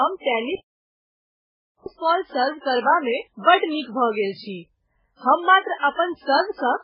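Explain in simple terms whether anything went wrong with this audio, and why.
The speech sounds dull and smeared for the whole clip, with nothing above about 5.2 kHz, likely from transcoding between lossy codecs, where each compression pass stacks new damage onto the last.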